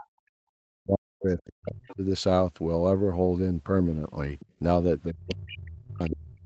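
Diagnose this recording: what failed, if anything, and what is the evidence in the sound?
The other side's voice is leaking through in five short scraps: 0.00–0.05 s, 1.87–1.95 s, 4.39–4.46 s, 5.29–5.54 s and 6.08–6.16 s. They sit well under the main speech, around 15 to 25 dB down. The last two are the loudest. The stage is call processing. The likely cause is an echo canceller that left some loudspeaker signal in the microphone path. Those residues pass straight into the call.

Speech is suppressed in double talk twice. From 0.23 to 2.03 s the talker dips repeatedly, for about 1.5 s in total. At its deepest the drop is roughly 40 dB. From 5.12 s to the end it happens again, reaching roughly 35 dB. Leaked far-end scraps fall inside both spans. This likely comes from the echo canceller's suppressor. It could not separate near-end speech from echo while both sides talked, so it turned everything down.

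The background is gated by the echo canceller from 4.46 to 4.59 s. The room sound drops by about 12 dB for roughly 150 ms. It returns when the canceller releases. The gate starts right after the leaked scrap at 4.39–4.46 s. That order points to the suppressor reacting to far-end playback. It clamped the microphone hard, taking the ambience down with it. This belongs to the call-processing stage, heard against audio band-limited to 8 kHz.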